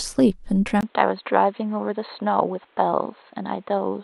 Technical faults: input switched to a poorer device

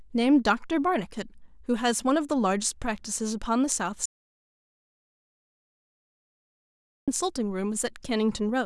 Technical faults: audio dropout to silence

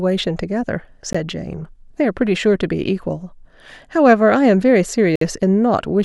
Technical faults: gap between stream segments

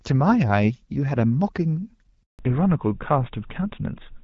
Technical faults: handover gap; fallback to narrowband

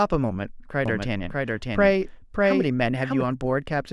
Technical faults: doubled audio track

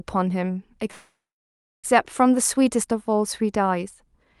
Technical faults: call audio freeze

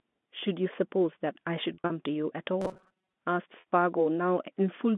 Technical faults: packet loss with pitch repetition; robotic sound from repeated short buffers

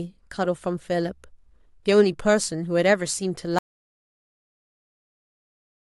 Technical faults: audio dropout to silence

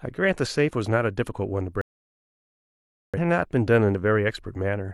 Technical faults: digital broadcast dropout

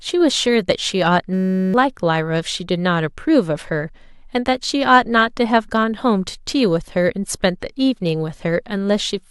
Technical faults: system hang loop

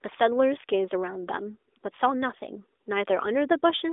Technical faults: none

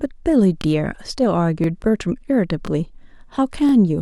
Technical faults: overlapping chunks

